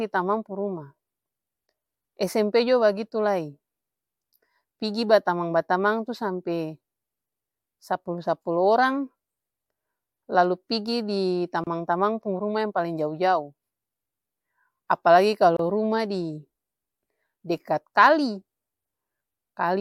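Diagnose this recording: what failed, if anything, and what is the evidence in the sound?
Codec stage: a gap at a join of encoded pieces, about 30 ms at 11.64 s and 28 ms at 15.57 s, where untrimmed encoder delay and padding leave silence.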